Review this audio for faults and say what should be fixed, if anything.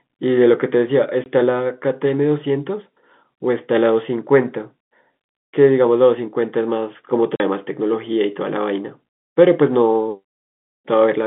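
Packet loss filled with silence cuts three holes into the speech, at 1.24 to 1.26 s, 3.38 to 3.40 s and 7.36 to 7.40 s. The first two last 20 ms and the third 40 ms, which fits one and two lost 20 ms packets. The receiver had nothing to play and inserted zeros, so each gap starts and stops abruptly. On the waveform these are flat lines with sheer edges. On the spectrogram they are blank vertical stripes crossing the whole telephone band of the G.711 call, which runs from about 200 Hz to 3.6 kHz. To prevent this, add packet loss concealment at the receiver so that missing packets are filled with extrapolated audio, and add a larger jitter buffer or forward error correction so that fewer packets are lost.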